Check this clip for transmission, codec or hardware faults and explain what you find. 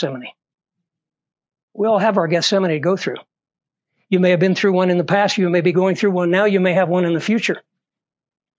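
The speech signal shows no transmission, codec or hardware faults at any point, with its level, timing and spectrum holding steady throughout.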